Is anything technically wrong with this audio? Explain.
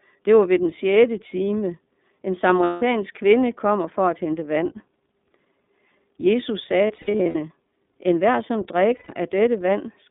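Yes. The whole recording has passed through the iLBC codec, and in three places lost iLBC frames leave short patches of concealment.

Throughout, the speech was squeezed through a narrowband VoIP codec that rebuilds each frame's excitation on its own, with no help from the previous frame. Only about 200 Hz to 3.6 kHz survives, so the sound is boxed-in and lacks sibilance. The damage is plainly audible as a rough, slightly synthetic edge. The frame rhythm points to 30 ms frames, which fits iLBC's 13.33 kbps mode.

From 2.64 to 2.83 s, just before "kvinde kommer for at", about 180 ms of audio was lost, which fits six 30 ms frames. The decoder filled the gap by repeating the last pitch cycle mixed with noise, so it sounds like a held, buzzy vowel. Because each iLBC frame stands alone, clean speech returns immediately afterward.

Between 6.87 and 7.36 s, the losses are scattered across nearly half a second and total about 270 ms. 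The longest single gap is around 70 ms. Here the concealment is heard as several brief smeared, droning blips broken up by real speech, rather than one continuous hold.

From 8.97 to 9.10 s, right after "hver som", a 120 ms gap was again covered by a repeated pitch cycle. It produces a short, breathy sustain before the speech snaps back.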